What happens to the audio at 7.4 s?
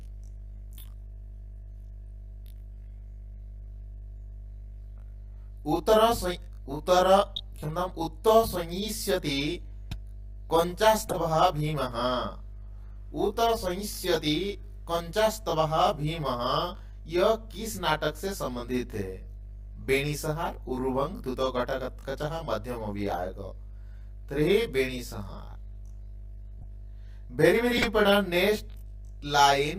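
A corrupt frame decoded between 7.36 and 7.40 s produces a brief chirp, squeak, blip or burst of noise of about 43 ms. Bits inside a few compressed frames were damaged, and the decoder rebuilt them anyway, so misread gains and codes scattered energy onto the wrong frequencies. On a spectrogram it appears as a narrow vertical smear of stray energy unrelated to the surrounding content; the waveform shows a short disturbance, with the error itself peaking around -15 dBFS.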